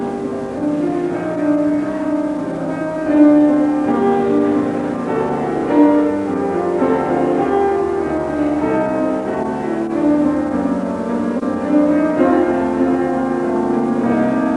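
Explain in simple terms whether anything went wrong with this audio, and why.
Nothing went wrong with this audio: the signal comes through intact, with no technical faults to be heard anywhere in it.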